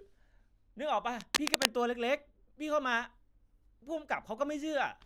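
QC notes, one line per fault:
1.21 to 1.65 s, cable scratch noise: a worn cable or connector was likely being moved, its contact resistance jumping rapidly, so a dense, uneven burst of scratchy, rustling noise, roughly as loud as the speech itself, sits over the sound for under half a second.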